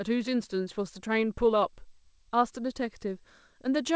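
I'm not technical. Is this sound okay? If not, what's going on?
Yes, nothing stood out on listening: this is speech carried over a call link using the G.722 codec, which normally keeps nothing above 8 kHz.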